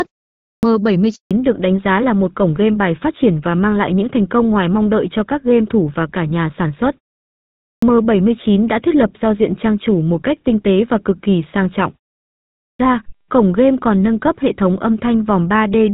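The output device had gone to sleep during a 0.3 s pause and was slow to wake, so the clipped start after a pause at 0.33 s swallows about 0.3 s of speech, which begins abruptly out of silence. At 1.15 s a handover gap follows: the call was switched between networks and no speech frames arrived, so the audio dies away and stays silent for 160 ms until 1.31 s. As the new link comes up, the call falls back to narrowband, and the light HD Voice character of the opening, which fits AMR-WB at around 12.65 kbit/s, gives way to a sound consistent with GSM full rate. From 1.31 s to the end nothing above 4 kHz remains, leaving speech duller and rougher. The device again sleeps through pauses of about 0.6 s, and the clipped starts at 7.55 s and 12.52 s each lose about 0.27 s, with speech cutting in abruptly.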